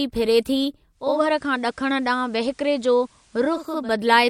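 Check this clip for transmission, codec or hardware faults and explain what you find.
One fault is present: digital radio blending to analogue. From 0.90 to 3.93 s, after "फिरे थी", the receiver lost its digital signal and cross-faded over 427 ms to the FM broadcast, then back. The speech gains faint hiss and dips about 1 dB.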